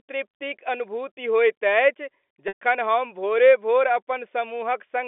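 At 2.48 s the speech briefly freezes into a held, buzzy tone that fades away by 2.57 s before the voice resumes, all heard over a narrow telephone band from G.711 coding. That is packet loss with pitch repetition: about 120 ms of audio went missing, which fits a run of six 20 ms packets, and the receiver concealed the hole by replaying the last pitch period and fading it out.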